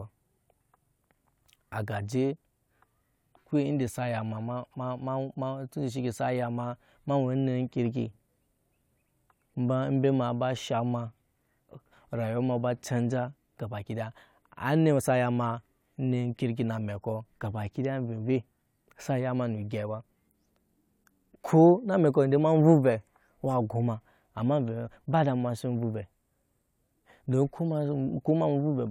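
No technical faults are audible.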